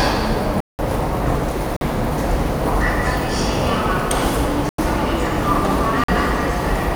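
A short sound clip with four blocks of digital silence: the audio drops hard to silence at 0.60 s for about 186 ms, at 1.77 s for 46 ms, at 4.69 s for 93 ms, and at 6.04 s for 46 ms. The power-of-two lengths suggest an output buffer that wasn't filled in time.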